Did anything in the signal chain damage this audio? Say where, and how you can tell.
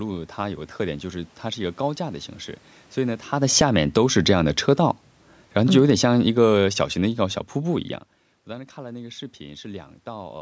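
Yes. From 2.97 s the speech and the room noise behind it sink together, ending about 10 dB quieter by 7.89 s. Because the background falls by the same amount as the voice, this is not the talker leaning away. The gain itself changed. This is automatic gain falling in the call processing stage: the automatic gain control judged the input too loud and lowered its gain gradually over nearly five seconds.

Between 3.8 and 4.7 s, partway through that decline, the level swells back up by about 4 dB, with voice and background rising together over roughly a second. This is automatic gain rising, from the same gain control in the call processing. Here it judged the input too quiet and briefly pushed its gain up. The talker's own movement near 3.5 s changes only the voice level, whereas this swell lifts the room noise as well.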